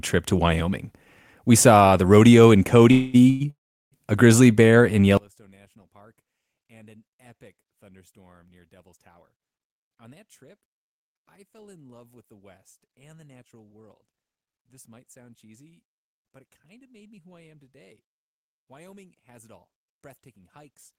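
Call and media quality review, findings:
Call audio freeze: speech stalls into a fading buzz at 2.91–3.16 s, 3.30–3.42 s and 3.50–3.94 s, the last dropping to about 370 ms of silence. Likely jitter buffer underrun; speech resumes intact, only delayed.

One channel inverted: from 5.17 s to the end, the mono sum collapses by about 34 dB into a faint residue. Likely reversed polarity on one stereo leg cancelling the shared centre content.

Jitter buffer speed-up: speech hurries at unchanged pitch at 9.27–10.80 s (108%), 16.14–17.32 s (107%) and 19.77–20.36 s (105%). Receiver trims pitch-period slices, roughly a tenth of a second per stretch, less in the last, to shed excess buffered delay.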